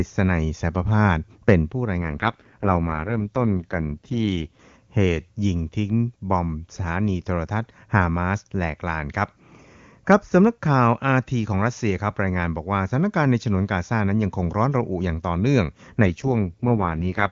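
From 1.98 to 4.60 s, and again from 16.06 s to the end, the speech turns rough and raspy, with a synthetic edge. This is an AMR rate drop. The band and continuity hold, but detail thins, which fits a fall from 23.85 to 6.6 kbit/s.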